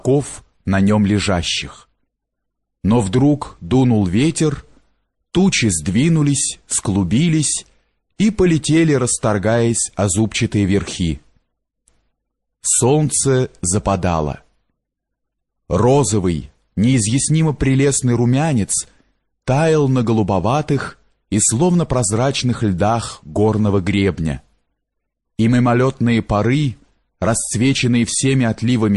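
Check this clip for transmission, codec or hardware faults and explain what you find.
Two faults are audible: steady codec damage across the whole clip, and one pre-echo at 8.16 to 8.19 s.

MP3 compression runs throughout. The treble is cut off, and the remaining high detail sounds watery and swirly, with metallic chirps on bright, noisy sounds and softened attacks. The likely cause is MP3 coding at a bitrate around 48 kbps, where the encoder runs short of bits. It drops the top band and zeroes weak frequency lines, and these switch on and off from frame to frame. That flickering swirl is what separates it from a plain low-pass filter, which would dull the sound evenly and produce no chirps.

The pre-echo occupies about 32 ms just before a sharp attack at 8.16 s. In that gap a hiss rises about 19 dB above the surrounding quiet, and the attack itself sounds smeared. The codec spreads its quantisation noise across a whole transform block, so noise sized for the loud onset also fills the silence ahead of it. 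The spread fits a long block of about 48 ms with no switch to short blocks. Unlike a click or dropout, the hiss comes before the onset and is tied to it, not to a gap in the signal.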